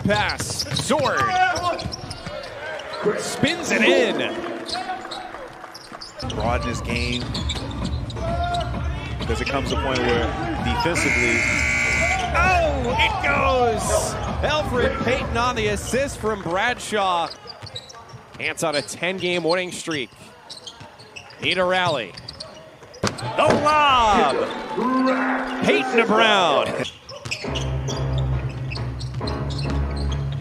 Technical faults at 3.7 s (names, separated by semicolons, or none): timecode bleed